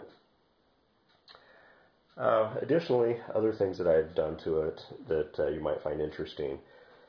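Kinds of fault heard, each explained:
No faults can be heard anywhere in the audio.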